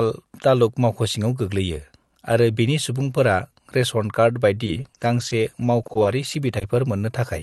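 Speech with repeated packet loss (robotic sound) from 4.65 to 6.63 s. Eleven brief dropouts, none longer than 20 ms, are each filled by extending the preceding sound, giving a choppy texture with pieces missing. A spectrogram shows repeated, smeared frames with thin breaks, and the waveform shows small repeated patches. The call path's energy stops near 12 kHz.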